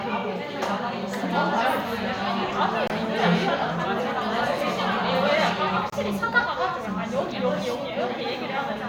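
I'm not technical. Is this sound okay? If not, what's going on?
No. There is a gap between chunks: brief hard-edged silences of about 25 ms at 2.87 s and 5.90 s, where 3-second pieces of audio are joined with space between.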